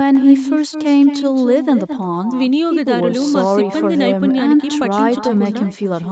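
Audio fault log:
Throughout: echo with no canceller. Every phrase comes back roughly a fifth of a second later, about 10 dB quieter. The far end's loudspeaker plays the call into its own microphone, and nothing removes that copy. So each syllable trails a thin shadow.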